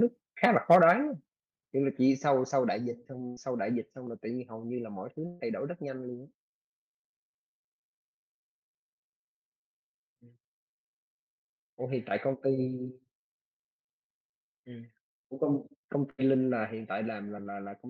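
From 0.44 to 0.91 s the loudest syllables take on a harsh, crackling edge, most likely microphone overload: the input ran about 5 dB past the converter's ceiling, and around 2% of samples are clipped. The waveform shows flattened peaks, and the spectrogram shows bright broadband smearing above the harmonics.

Within that stretch, at 0.76 s, the level drops by about 3 dB, with further steps of about 5 dB at 1.75 s and about 2 dB at 2.77 s. Each step is likely the microphone volume being stepped down by the call software after the overload. Voice and background fall together, and the waveform envelope shrinks abruptly at each point.

From 3.27 to 3.39 s comes a burst of packet loss, with about 100 ms missing. The receiver continues the last sound and fades it before the audio resumes further along. On a spectrogram this appears as frozen, fading content followed by a sharp change of content. 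A longer burst at 5.27 to 5.42 s drops about 140 ms and is bridged the same way, with no silence.

At 14.38 s a short concealed packet loss of about 20 ms produces a brief smear or wobble. The patched region shows as a thin vertical seam in the spectrogram, and any short consonant there can vanish.

A third burst at 16.10 to 16.20 s loses about 80 ms, filled by continuing the last sound as it fades. At 16.67 s another drop of about 2 dB, likely the microphone volume stepped down once more, appears as a sudden narrowing of the waveform envelope.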